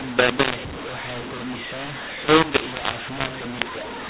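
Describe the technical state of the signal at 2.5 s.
At 2.5 s, as throughout, the speech suffers a mu-law and A-law mix-up: telephone audio coded with A-law is decoded as mu-law, scrambling sample levels. Unlike simple overload, both loud and quiet parts distort, and pauses fill with noise above silence, within the 4 kHz telephone band.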